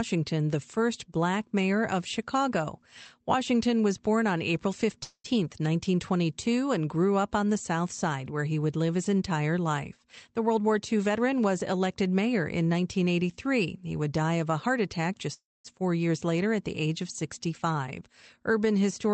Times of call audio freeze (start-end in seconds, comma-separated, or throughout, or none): 5.03-5.26, 15.34-15.66